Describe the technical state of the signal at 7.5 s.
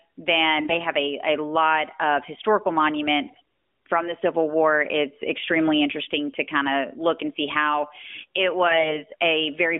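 At 7.5 s the speech comes through intact, with the narrowband mobile sound of the AMR codec path as expected and no fault present at that moment.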